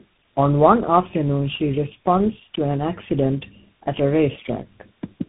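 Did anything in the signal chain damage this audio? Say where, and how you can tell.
Yes. Throughout the speech, the sound is rough, muffled and warbly, with nothing above 3.8 kHz. That is tandem speech coding at the codec and network stage. The call seems to have crossed several links, each decoding and re-encoding with its own speech coder, so each stage worked on the previous one's artefacts. The accumulated roughness fits about three speech coders in a row, ending in a CVSD-style coder.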